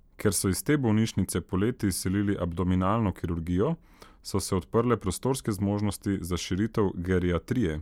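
No technical faults detected.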